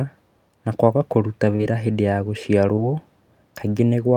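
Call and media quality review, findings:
Brief smear/wobble at 1.55–1.61 s, right after "na kwaga kũruta", and 2.75–2.79 s. Short concealed packet loss: about 40 ms and 20 ms never reached the decoder in time. The receiver's concealment extended the preceding sound, then crossfaded back into real audio.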